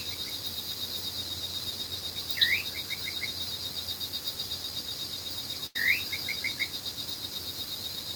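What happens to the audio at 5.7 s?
Around 5.66 to 5.76 s there's a burst of packet loss. Several consecutive packets never made it in time, so the receiver papered over the hole by stretching the last bit of sound it had and letting it fade for about 86 ms. You hear that as a brief smeared, dying tail, and then playback jumps ahead, with roughly 80 ms of the original audio simply gone.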